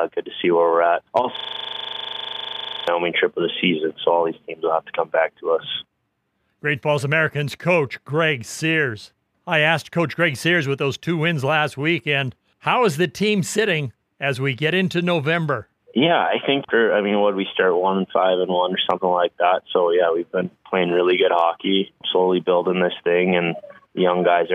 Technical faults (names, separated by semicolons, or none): system hang loop